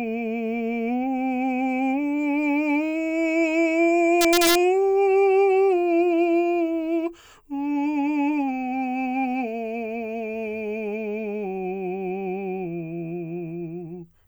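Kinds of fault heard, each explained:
Integer overflow, from 4.21 to 4.55 s: for about a third of a second the music's loudest peaks push roughly 1 dB past the largest value the integer format can hold, and instead of being held at the ceiling each overshooting sample wraps around to the opposite extreme. Every such peak becomes a full-range jump, heard as harsh, violent cracks on the loud moments, far sharper and more abrupt than ordinary clipping.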